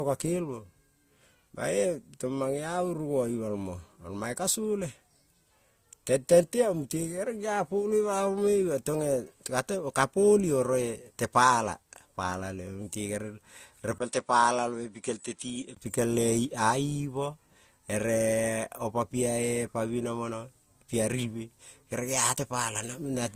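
Transcoding between lossy codecs runs throughout this speech clip. Layered artefacts and nothing above 15.7 kHz point to an AAC-LC pass likely re-encoded through Opus, each near 48 kbit/s. Input switched to a poorer device from 13.98 to 15.77 s: after a 20 ms gap, the band narrows to 10.5 kHz, level drops about 5 dB, and a faint new noise floor appears, likely from a different microphone.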